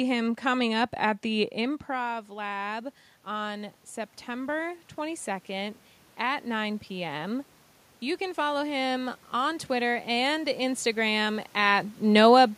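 A speech clip in which, just after "coming up at the", automatic gain rising sets in: from 1.63 s to 7.5 s the level creeps up by about 6 dB as the control compensates for input that fell by about 10 dB when the talker moved back around 1.5 s. Unlike the talker's own movement, the slow swell lifts the room noise along with the voice, which gives away the gain stage rather than distance.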